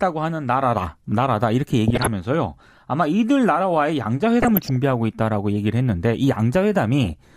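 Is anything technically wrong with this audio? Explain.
Yes. DAB burbling at 1.88–2.13 s, 4.40–4.76 s and 7.04–7.13 s: bit errors of around 0.4 to 0.7 percent get past error correction into the MP2 data, making sub-bands jump for up to a frame. The speech gets short blips of noise, visible on a spectrogram as scattered band-limited blocks.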